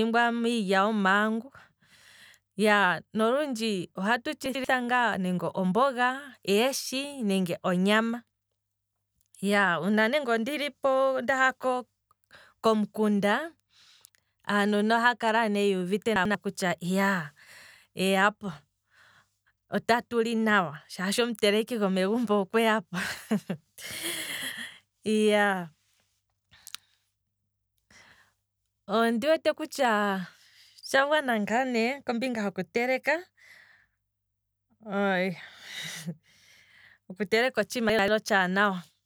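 At 4.46 to 4.64 s, 16.16 to 16.35 s and 37.90 to 38.08 s, chunks out of order: a roughly 93 ms chunk plays one chunk late, swapping places with its neighbour. The speech briefly jumbles, with three hard joins, but unlike a dropout, nothing is missing.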